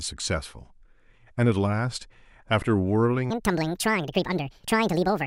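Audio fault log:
3.30 to 5.27 s: section at the wrong speed. The final stretch of this speech plays about 1.76 times too fast. Pitch rises by roughly ten semitones along with the tempo. The speech turns high and hurried. A playback clock mismatch is the likely cause.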